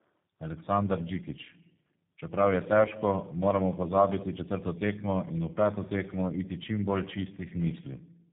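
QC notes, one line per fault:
Throughout: tandem speech coding, speech passing through three coders in a row, ending at G.729A, each reworking prior losses; rougher, warblier than one codec, nothing above 3.6 kHz.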